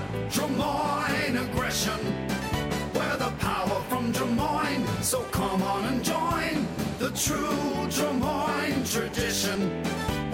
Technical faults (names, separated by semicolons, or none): damaged data in a compressed stream